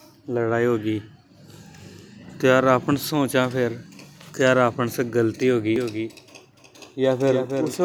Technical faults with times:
5.76-7.85 doubled audio track

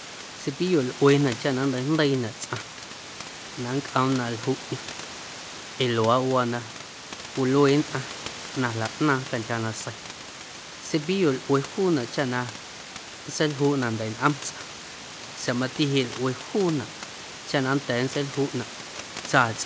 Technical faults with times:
none

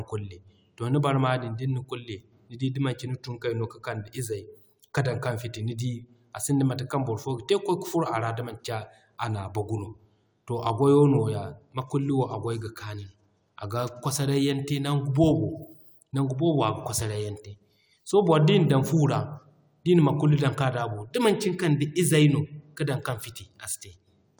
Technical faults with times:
none

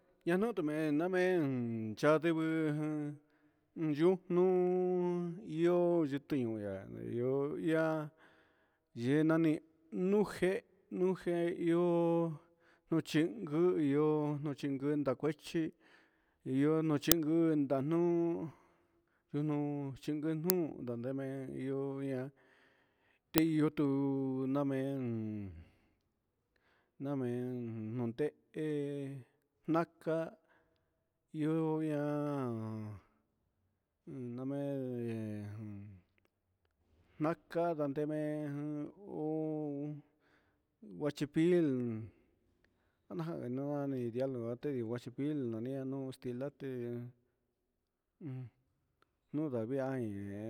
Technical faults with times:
17.12 uninitialised buffer
20.50 uninitialised buffer
23.38 uninitialised buffer

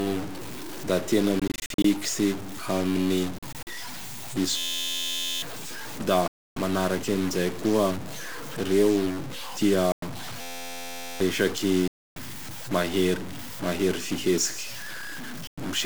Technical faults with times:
0.00-15.86 stuck bit
1.39-1.85 Bluetooth dropout
3.38-3.67 Bluetooth dropout
4.57-5.42 system hang loop
6.28-6.56 Bluetooth dropout
9.92-10.02 Bluetooth dropout
10.41-11.20 system hang loop
11.88-12.16 Bluetooth dropout
15.47-15.58 Bluetooth dropout

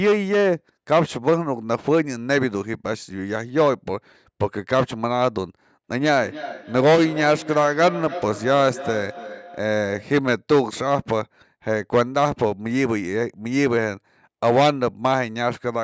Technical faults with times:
5.95-10.25 feedback echo between two devices

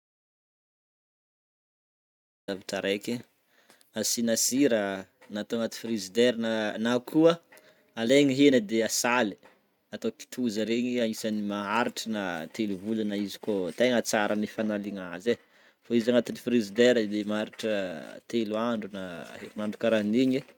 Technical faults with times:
0.00-2.48 audio dropout to silence

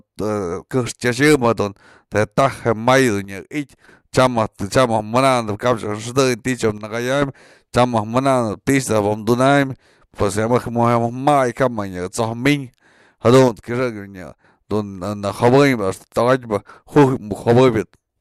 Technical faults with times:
3.25-3.88 one channel drops out
6.78-7.22 one channel drops out
13.48-14.44 one channel drops out

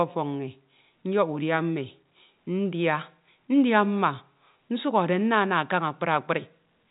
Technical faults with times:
none

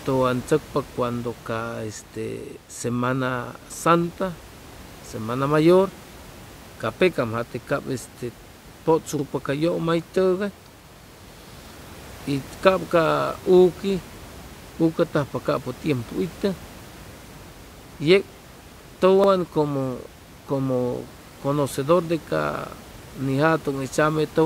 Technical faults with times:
9.19-9.24 overlapping chunks
19.24-19.29 overlapping chunks

